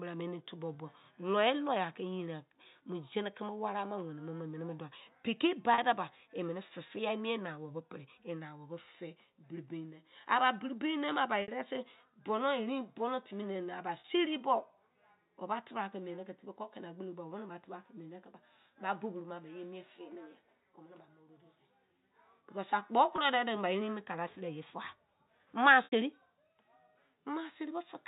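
Packets were lost at 5.74, 11.42, 14.0, 23.16 and 25.84 s, causing packet loss with pitch repetition. The receiver repeated the last pitch period across gaps of 40, 60, 40, 20 and 80 ms. The shorter gaps are heard as brief, buzzy held tones, and the longer ones fade into silence before the speech returns with a short cross-fade.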